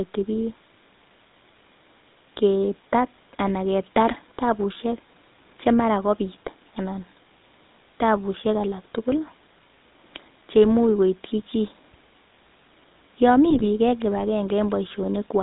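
GSM full-rate codec coding runs through the whole clip, with plainly audible damage consistent with the 13 kbps full-rate coder. The speech is rebuilt from a vocal-tract filter driven by sparse regular pulses, leaving a buzzy, gravelly roughness and nothing above 4 kHz.

GSM bit errors strike from 13.50 to 13.67 s. Corrupted filter, pitch and gain parameters reach the decoder, which fits a bit error rate around 1 percent, and for those frames the speech breaks into squawks, pops and gargling.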